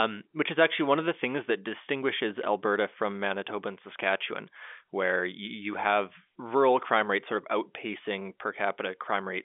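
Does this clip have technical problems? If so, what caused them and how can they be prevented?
No, nothing goes wrong; it's ordinary telephone-band speech.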